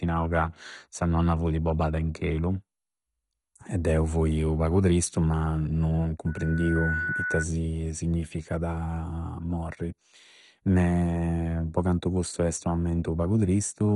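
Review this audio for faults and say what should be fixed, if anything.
Throughout the speech, the sound is dull and gurgling, with a granular roughness and nothing above 11.2 kHz. This is likely MP2 compression under heavy strain: too few bits force the coder to shut off its upper sub-bands and quantise the remaining ones coarsely, which fits a low rate of around 56 kbps. On a spectrogram, a hard ceiling sits at 11.2 kHz, with patchy, flickering blocks in the bands below it. Encode at a higher bitrate, or with a modern codec, to prevent this.

A loudspeaker feedback squeal starts at 6.26 s, right after "pagu tristu ma non", and lasts until 7.46 s. A pure 1.5 kHz tone swells over roughly 0.7 s until it is about as loud as the speech, because the microphone is re-amplifying its own loudspeaker output with loop gain above one at that frequency. A spectrogram shows a bright horizontal line at 1.5 kHz, and the waveform shows a growing sinusoidal envelope. 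Lower the gain, reposition the microphone, or notch 1.5 kHz to prevent it.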